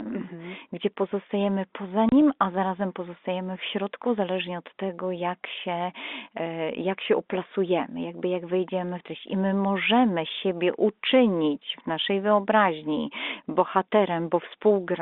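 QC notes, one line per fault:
2.09–2.12 s, packet loss filled with silence: 30 ms hard-edged gap after "mhm gdzie pozostajemy poza", which fits three lost 10 ms packets replaced by silence.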